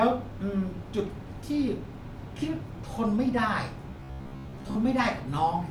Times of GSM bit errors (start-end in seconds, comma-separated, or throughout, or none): none